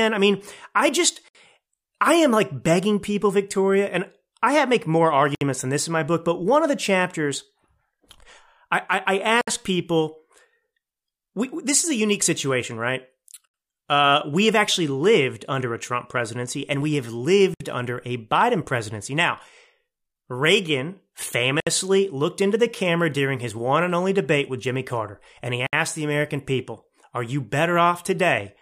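Gaps at joins of encoded pieces: the speech was encoded in separate 4-second pieces and joined without trimming, so each join keeps the encoder's start-up delay and last-frame padding. The result is a silence of about 64 ms that cuts into continuous speech at 1.28, 5.35, 9.41, 13.48 (after "a unique situation right"), 17.54 (between "presidency and we have" and "under a"), 21.60 and 25.67 s. The edges are smeared, and the speech resumes where it stopped.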